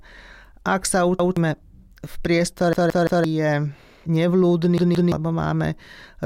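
A stutter in the speech, where one piece about 0.17 s long plays twice at 1.20 s, four times from 2.73 to 3.24 s and three times from 4.78 to 5.12 s, each repeat meeting the next with a hard join. This is a repeated buffer: fresh audio arrived late, so the device replayed its last block, a length that fits an 8192-sample buffer. Roughly a sixth, half and a third of a second of audio go missing.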